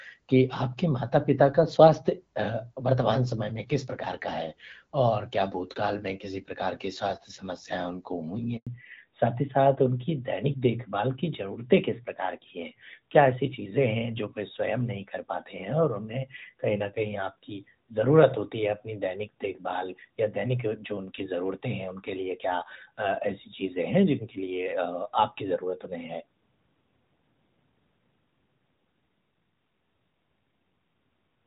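A handover gap opens at 8.57 s in this speech recording: the signal fades within a few tens of milliseconds and stays silent for 100 ms, until 8.67 s, as the call switches networks and no speech frames arrive, so that stretch of talk is simply missing. A fallback to narrowband follows at 8.67 s and lasts to the end. Nothing above 4 kHz survives from then on, and the voice becomes duller and rougher. The sound points to a drop from HD Voice, AMR-WB at about 12.65 kbit/s, to narrowband AMR at about 12.2 kbit/s. Before the switch, the wideband codec carries the speech with only light coding damage.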